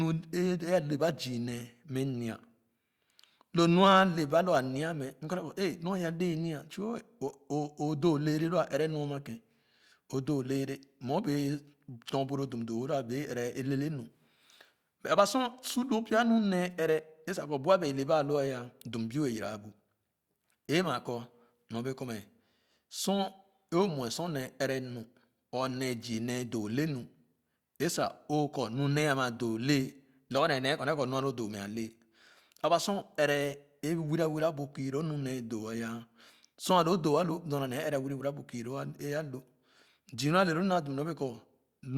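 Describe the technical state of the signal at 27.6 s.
At 27.6 s the speech signal is intact, with no audible dropout, distortion, glitch or other technical fault at that moment.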